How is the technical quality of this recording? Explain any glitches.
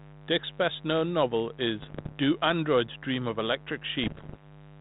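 The recording has two technical problems: a constant mains buzz under the speech, and two short bursts of corruption on what sounds like an ADPCM link. The narrow telephone band, with nothing above 4 kHz and only light coding grain, fits G.726 at 32 kbit/s.

Mains buzz runs through the whole clip. Switching spikes from a dimmer, a rectifier or an unshielded lead are leaking into the signal path twice per 50 Hz cycle, and their harmonics climb well into the kilohertz range. The result is a steady, raspy buzz at about 20 dB below the speech.

Bit errors on an ADPCM link strike from 1.78 to 2.13 s and again from 4.03 to 4.42 s. The error rate is somewhat under one percent in the first burst and around one percent in the second. Each flipped bit also throws off the decoder's step size and predictor, so one error keeps distorting the output for several milliseconds until the decoder recovers. 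In both stretches this comes through as pops and rough, gritty bursts, with the level briefly jumping and dipping.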